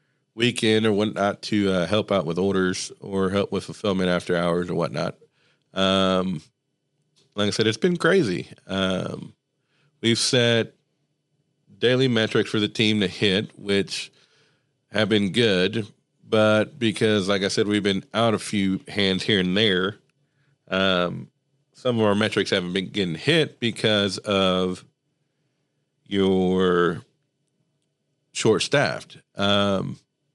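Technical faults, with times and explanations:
Throughout, Bluetooth LC3 compression: the speech carries a plainly audible grainy, breathy edge up top. The codec discards much of the high band at this modest rate, which fits about 48 kbps, and fills it with noise, likely from an LE Audio link using 10 ms frames.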